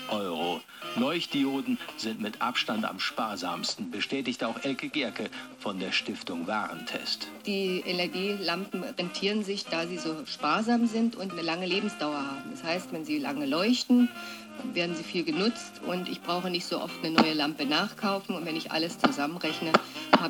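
From 3.68 to 6.71 s, 8.93 to 12.76 s and 14.40 to 15.88 s the audio shows a Bluetooth SBC bit pool drop. The sender throttled the encoder on a strained link, which fits a fall from a bit pool of 28 to about 12, near 96 kbps. Starved of bits, the upper sub-bands thin out and the remainder is coarsely quantised, so each stretch sounds duller and grainier before full detail returns.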